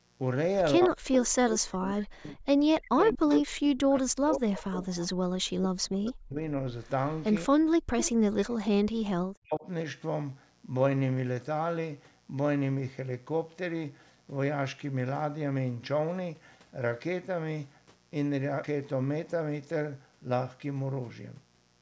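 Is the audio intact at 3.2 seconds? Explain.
No. A steady, raspy mains buzz runs under the whole clip, including this moment, at about 35 dB below the sound. Sharp switching spikes twice per 60 Hz cycle leave a dense ladder of harmonics, which sounds edgier than a smooth, pure hum.

From 0.76 to 6.38 s the speech keeps dipping, thinning and cutting out in pieces, sinking as deep as roughly 40 dB. This is speech suppressed in double talk, likely from an echo canceller that turned everything down while both sides spoke. A dropout would be a clean gap, but these level swings follow the other talker.

Between 3.02 and 3.4 s, a copy of the voice trails about 187 ms behind, around 10 dB below the speech. This is likely an echo leak: a loudspeaker's sound slipped past an echo canceller and returned. Room reverb would smear the sound, while this arrives as a distinct, delayed copy.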